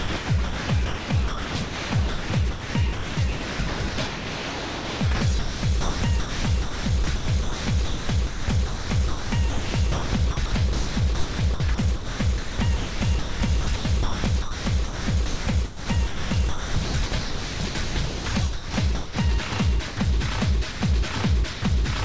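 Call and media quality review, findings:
Sound chopped by the voice detector, 0.0–18.26 s and 18.53–19.16 s: sound repeatedly switching to synthetic background, about 10.5 s replaced in the first stretch. Likely sender VAD gating on and off, comfort noise filling gaps.

Sound dropped by the voice detector at 19.49–19.52 s, 19.88–19.97 s, 20.72–20.81 s and 21.53–21.62 s: brief cut-outs to steady noise, 30–90 ms each. Likely VAD misclassifying quiet sound as background.

Audio is band-limited to 8 kHz, consistent with the G.722 call path.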